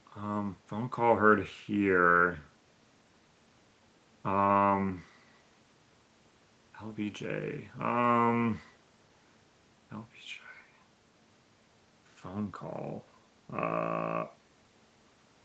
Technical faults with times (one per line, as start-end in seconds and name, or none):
none